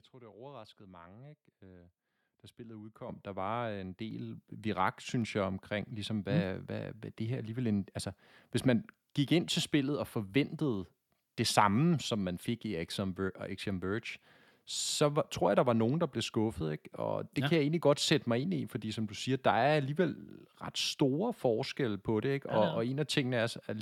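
The call software judged the microphone too quiet and raised its input volume in steps, twice in this speech clip: microphone volume stepped up at 3.09 s, right after "da spillet", by about 9 dB, and again at 4.11 s, after "var en", by about 4 dB. Each time the voice and the background noise jump louder together, abruptly, so the level climbs in two audible stairs within about one second.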